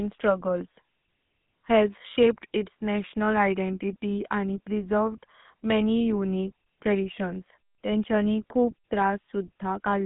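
GSM full-rate codec damage runs throughout this speech recording, from the first moment to the last. The codec rebuilds the voice from a vocal-tract filter driven by a sparse, regularly spaced pulse train, so every stretch carries a plainly audible buzzy, gravelly grain, consistent with a 13 kbps coder. The sound sits in a telephone band of roughly 200 Hz to 3.6 kHz, with nothing at all above 3.8 kHz, giving it a muffled, boxy quality.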